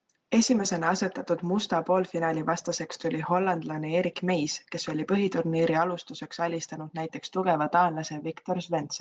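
No technical faults can be heard in the speech, which carries a faint room noise about 52 dB below it and the band-limited sound of a call codec, with its content reaching up to 8 kHz.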